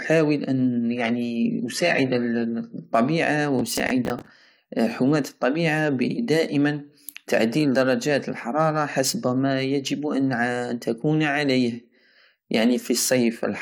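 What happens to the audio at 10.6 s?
Nothing goes wrong at 10.6 s: the speech carries straight through that moment without any dropout, click, distortion or other audible fault.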